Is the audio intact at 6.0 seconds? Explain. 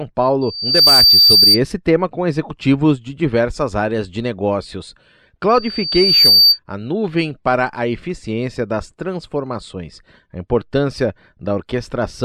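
No, a loudspeaker feedback squeal runs from 5.49 to 6.59 s, after "diversas áreas de negócios": a microphone re-amplifying its own loudspeaker makes a single 4.6 kHz tone swell over roughly 0.7 s to about 10 dB above the speech, unlike a steady hum.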